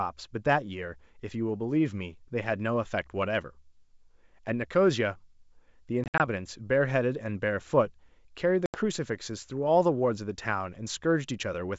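Packet loss on an ADPCM call hits at 6.04–6.27 s, with 100 ms lost in hard-edged gaps (longest 60 ms), and at 8.66–8.78 s (80 ms). The decoder's predictor and step size desynchronise, so sound resumes briefly distorted.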